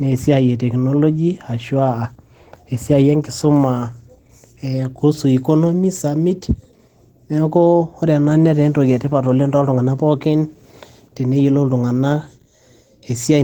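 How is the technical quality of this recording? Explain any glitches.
The recording has plainly audible codec damage from start to finish. Throughout the speech, the sound is hoarse and muffled, with a rough, grainy texture on sustained sounds, even though content reaches up to about 20.1 kHz. This is likely Opus compression working at a very low bitrate, which fits roughly 16 kbps in its hybrid speech mode. The encoder codes the lower band with linear prediction and fills the upper bands with coarse energy and noise, producing that grit.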